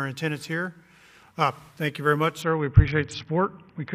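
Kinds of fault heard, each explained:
Bluetooth SBC bit pool drop: from 2.42 s to the end the treble dulls and a gritty noise rises, which fits the encoder cutting its bit pool from 31 to 6, near 55 kbps, so the upper sub-bands lose their bits and the rest are coarsely quantised.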